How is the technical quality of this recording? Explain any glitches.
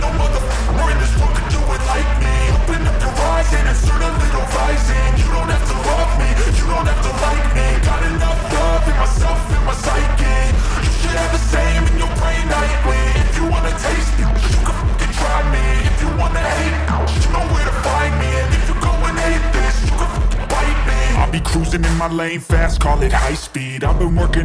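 Nothing in the recording stood out as a technical problem on listening, so there are no glitches to explain.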